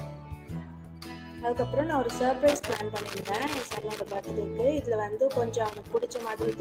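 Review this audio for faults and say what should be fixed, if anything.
A speech-style noise suppressor has been left running on the whole clip, and it keeps treating steady material and decays as noise. Levels swing by roughly 10 dB as it clamps down and lets go, so the sound pumps and thins out. Switch it off, or bypass it, for anything that isn't speech.

You can hear the noise suppressor cutting sound hardest from 0.04 to 1.42 s, where sustained parts sink by about 8 dB for a second and a half or so. It happens again briefly from 5.76 to 5.95 s, dipping about 6 dB. Bypassing the suppressor prevents both.

There's loose connector crackle from 2.48 to 4.21 s and again from 5.66 s to the end. It's an irregular scratchy burst, the sound of a worn or dirty contact making and breaking as it moves and chopping up the signal. Reseat or replace that cable and clean the contacts before recording.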